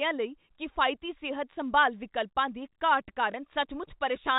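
At 3.32 s, just after "ਸੰਭਾਲ ਵਿਕਲਪਾਂ ਦੀ ਘਾਟ", there is packet loss with the last packet repeated. About 20 ms of audio went missing, which fits one lost packet. The receiver replayed the previous packet to fill the gap, and the single repeat comes through as a small blip. The blip sits within the narrow telephone band of G.711 coding.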